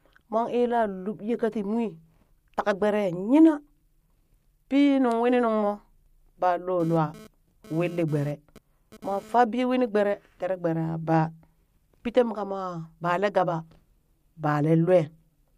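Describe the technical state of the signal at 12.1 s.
At 12.1 s the speech signal is intact, with no audible fault at that moment.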